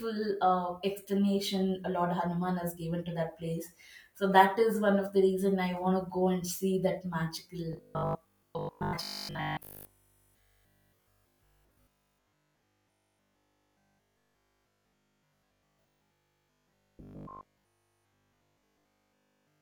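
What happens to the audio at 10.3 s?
At 10.3 s the speech is inside a stretch of robotic sound from repeated short buffers that runs from 7.73 s to the end at 19.61 s. The voice becomes a rigid, metallic buzz fixed at 50 Hz that only loosely tracks the words. This is likely audio arriving too seldom, with a segment of about 20 ms replayed over and over in place of the skipped audio for practically the whole span.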